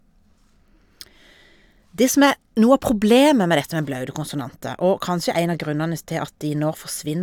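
Nothing in this short speech recording stands out as a technical fault, so there's no problem here to point to.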